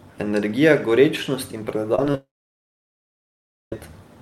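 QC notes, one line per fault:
1.95 to 2.15 s, short concealed packet loss: three brief gaps at 1.95, 2.05 and 2.12 s, each 10 to 30 ms of audio that didn't arrive in time. The decoder patched each one by extending the previous sound, so you get quick smears and wobbles instead of clean speech.
2.15 to 3.73 s, long network dropout: roughly 1.6 s of audio is gone, likely a network outage. The concealment stretches the last sound briefly before it fades, then there's about 1.45 s of near-silence, and speech returns with that section missing.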